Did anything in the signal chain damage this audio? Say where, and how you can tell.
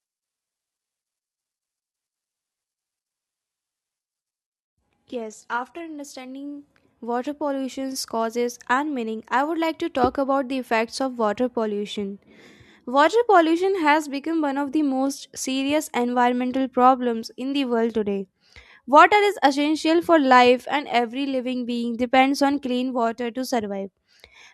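Yes. For the first 6.0 seconds the speech sounds dull and smeared, with thin, synthetic-sounding treble and strong codec swirl. At 6.0 s the quality improves abruptly with no gap, though nothing reaches above 11.8 kHz even afterwards. This is an adaptive stream starting at a low bitrate, a network and codec fault: the player opened on a cheap rendition, consistent with roughly 16 kbit/s band-replicated audio, then switched to a higher-bitrate rendition, nearer 96 kbit/s, once its throughput estimate allowed.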